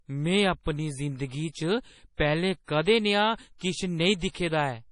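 Heavy MP3 compression, likely from an encoder starved of bits, which fits a bitrate around 32 kbps, has removed everything above 10.5 kHz and lets weak frequency lines drop in and out, so the speech sounds dull and watery throughout, with swirling sibilants and smeared attacks.

Pre-echo arises where the codec spreads the quantisation noise meant for a sharp onset across its whole block. A brief hiss therefore runs ahead of softened attacks at 2.15 to 2.19 s (41 ms) after "जिंदगी च", then at 4.19 to 4.21 s (28 ms) and 4.30 to 4.35 s (48 ms) after "कदें नेहा किश".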